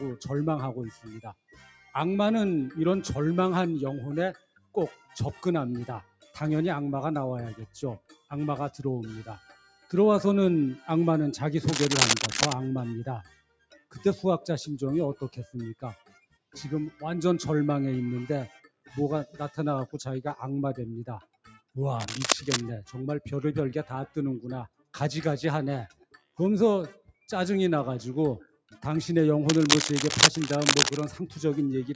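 A speech-style noise suppressor was left running across the whole thing, treating steady, sustained parts of the sound as noise, so levels swing by roughly 10 dB and it pumps. It bites hardest where it cuts the sound outright: 0.91–1.94 s, 4.33–10.87 s, 13.23–19.4 s, 21.2–21.76 s and 24.07–28.78 s, with drops of about 18 to 19 dB. Held parts and tails sink while sharper onsets come through.

In between, there's scratchy, uneven rustling at 11.67–12.53 s, 22.0–22.61 s and 29.49–31.05 s, sitting about level with the sound or a bit above it. That's cable scratch noise, likely from a worn cable or connector being moved.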